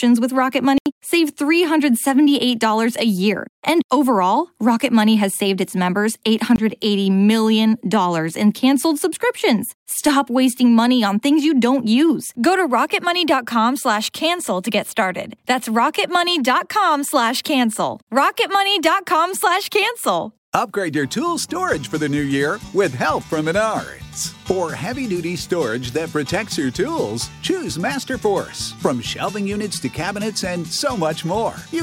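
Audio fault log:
0.78–0.86 s and 6.56–6.58 s, block of digital silence: the signal drops to silence for 80 ms, then for 20 ms, with no fade either way, which points to output buffers that were not filled in time. The first gap sounds like a short hole and the second like a briefer one. The waveform shows a flat line at zero, and the spectrogram shows vertical broadband streaks at each edge around a blank column.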